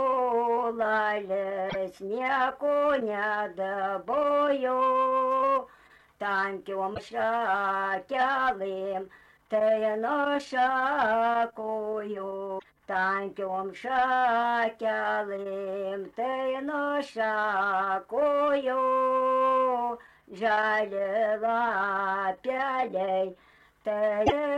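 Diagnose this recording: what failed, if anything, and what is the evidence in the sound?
Damaged data in the compressed stream, at the codec stage: brief glitches at 1.66–1.76, 6.91–7.00, 12.55–12.65 and 24.23–24.33 s, where the decoder misreads bad frames and resyncs.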